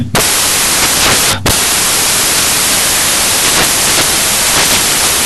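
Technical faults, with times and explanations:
Throughout: samples built from the wrong bytes. Each sample's bytes are combined in the wrong order or alignment, so the rapidly changing low-order bits land in the most significant position. The speech turns into loud, harsh broadband noise, close to white on the louder sounds.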